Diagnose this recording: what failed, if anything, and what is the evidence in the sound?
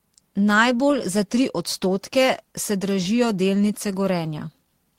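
Nothing in this speech recording stood out on listening as a failure at any stage of the chain.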